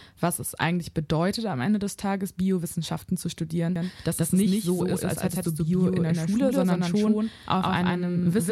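From 3.76 s onward, a doubled audio track: an equally loud copy trails about 150 ms behind, likely a slower capture path, twinning every waveform burst.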